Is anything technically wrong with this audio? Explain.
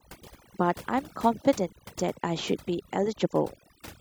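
Yes. Overdone noise removal runs throughout: an over-aggressive noise reducer cuts frequency bands near its noise estimate, taking quiet speech with them, leaving near-silent, twinkling gaps.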